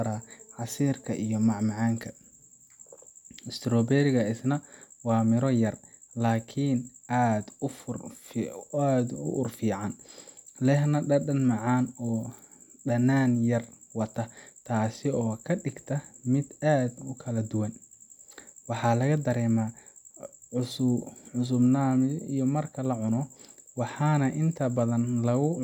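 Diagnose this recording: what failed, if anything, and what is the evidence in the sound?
Nothing failed; no fault is audible in the recording.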